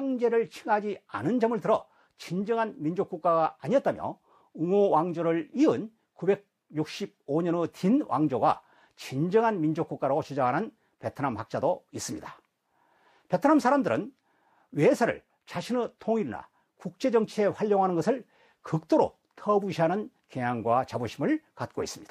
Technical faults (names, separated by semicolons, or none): none